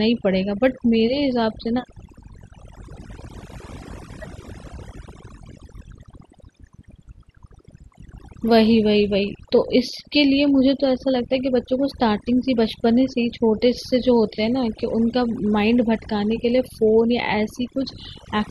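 Overdone noise removal runs throughout this speech recording, from start to finish. A noise reduction stage set too aggressively is pulling individual frequency bands down or out entirely whenever they sit close to its noise estimate. The background drops and breaks up into twinkling, chirpy specks, and because the softer components of the voice fall inside that same threshold, they get stripped too.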